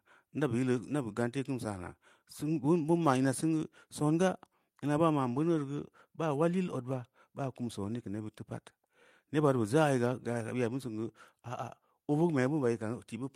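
No technical faults can be heard anywhere in the speech recording; the signal stays continuous and steady throughout.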